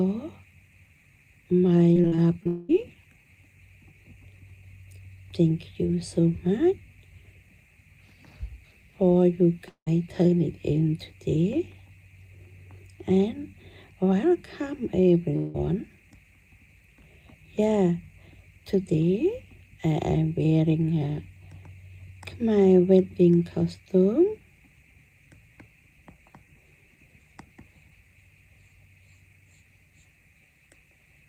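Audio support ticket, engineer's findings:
Repeated packet loss (robotic sound), 1.93–2.47 s. Choppy stretch: five short holes, longest 41 ms, about 120 ms missing in total. The jitter buffer and concealment stage repeats the last audio over each hole, so roughly 22% of this span is synthesized fill. That fill produces the robotic texture.

Long network dropout, 2.47–2.71 s. Follows directly on the packet-loss burst. About 220 ms of audio is missing, filled by a stretched buzz or hiss with no silent portion. Likely cause: the upstream transport stalled and the receiver extended the last audio until data resumed.

Long network dropout, 9.69–9.88 s. 180 ms lost. The concealment buzz or hiss fades out and leaves about 90 ms of silence. Audio resumes without the missing section. Likely cause: a network interruption long enough to exhaust the concealment.

Long network dropout, 15.36–15.56 s. 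180 ms lost, covered entirely by decaying fill with no silence. Audio picks up after the gap with that section absent. Likely cause: a brief transport outage.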